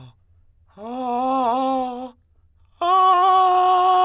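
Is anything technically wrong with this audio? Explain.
No, nothing technically wrong can be heard in this music clip. The audio comes through without any audible fault.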